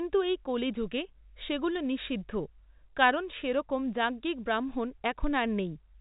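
No technical faults occur in this speech clip; it carries the narrow band of G.711 telephone coding, with nothing above about 3.8 kHz and only faint coding noise riding under the signal.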